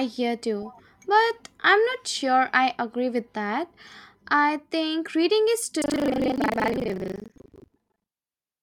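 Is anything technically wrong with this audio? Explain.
Yes. From 5.8 s, just after "I think reading is", to the end of the clip, the speech carries buffer tearing. The writer and the hardware reader of the ring buffer have drifted out of step and cross inside each period, so roughly half of every buffer plays audio from about 150 ms earlier, spliced in with hard edges. The repeating joins produce a rough, robotic 25 Hz rattle, which fits a 40 ms buffer period, present wherever the speech is.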